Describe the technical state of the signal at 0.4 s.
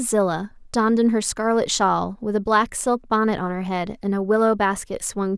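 At 0.4 s the speech signal is intact, with no dropout, distortion, glitch or other fault to be heard at that moment.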